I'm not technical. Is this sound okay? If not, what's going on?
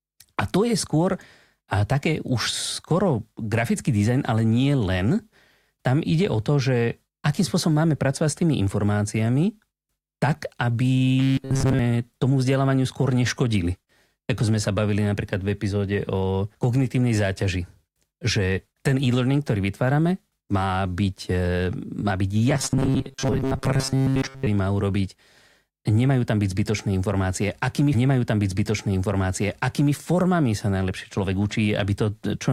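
No. There are two kinds of fault.

Robotic sound from repeated short buffers, at 11.2 to 11.8 s and 22.5 to 24.5 s: the speech turns into a stiff, metallic buzz pitched at 134 Hz. The likely cause is audio arriving late, so the player keeps re-playing a tiny slice of about 7.5 ms and skips most of the real sound.

Stream segment repeated, at 27.93 to 29.93 s: two seconds of speech play a second time, with a small click where it jumps back. The player fetched or queued the same chunk twice, adding 2 s to the clip.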